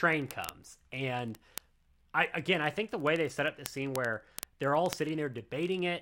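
From 0.10 s to 5.99 s come word clock ticks. The receiver's unlocked clock runs roughly a tenth of a percent off, dropping or repeating one sample about every 20 ms. These sharp, uneven clicks show as evenly spaced vertical spectrogram lines and single-sample waveform steps.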